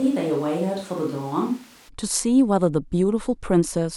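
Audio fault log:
0.00–1.87 s, switch to a distant microphone: the speech is already hollow and roomy when the clip opens, thin in the bass, roughly 5 dB quieter, with room noise only about 25 dB below it. At 1.87 s it snaps to a close, full sound, so the cause is likely the recording falling back to a far-off microphone. A plain gain drop or added reverb would not change level, tone, noise floor and room sound together in one sudden step.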